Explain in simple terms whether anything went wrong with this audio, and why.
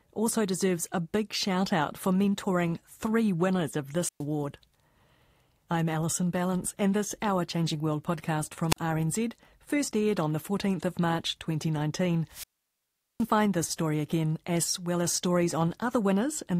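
Yes, something went wrong. This speech recording has three wireless microphone squelch dropouts. The radio link from the microphone weakened, so the receiver shut its output off for a moment. Each time, a short burst of hiss comes first. Then the sound falls into near silence, and the voice comes back. The first is at 4.01 s, just after "mentoring three winners of", with a gap of about 0.12 s. The second is at 8.69 s and is very brief, about 0.04 s. The longest starts at 12.29 s and goes quiet for about 0.77 s before "this story again as".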